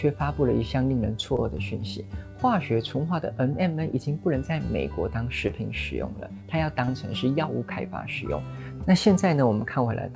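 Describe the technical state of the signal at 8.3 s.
At 8.3 s the audio is intact, with no dropout, glitch or distortion; the content simply stops at 8 kHz, the band limit set by the call codec.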